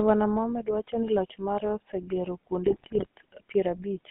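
Throughout, the speech has a buzzy, gravelly roughness and a narrow band running from about 150 Hz to 3.4 kHz. This is plainly audible GSM full-rate codec damage: the vocal tract is modelled and driven by sparse, regularly spaced pulses, which fits a 13 kbps full-rate link.

From 2.66 to 3.06 s, just after "ni loch mare osegero", the sound breaks into squawks, pops and gargling. These are GSM bit errors. Flipped bits corrupt the filter, pitch and gain values, distorting the spectrum and level frame by frame, which fits an error rate of roughly 2%.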